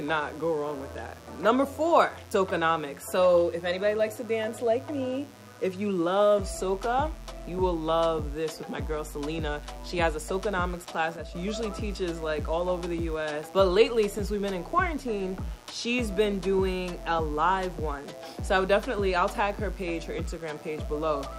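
A steady, raspy mains buzz sits under the audio throughout, about 25 dB below the signal, with sharp-edged harmonics of 60 Hz extending well up the spectrum from switching spikes. From 11.16 to 11.35 s the level falls abruptly by about 6 dB and then recovers, most likely because one stereo channel briefly dropped out before the mono sum.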